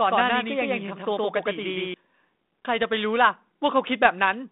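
Speech over a narrowband telephone line shows a doubled audio track from the start until 1.94 s: a second, equally loud full-band copy trails by about a tenth of a second, likely from a second, slower capture path. Unlike a room echo, the copy has no decay or room colour and stops abruptly.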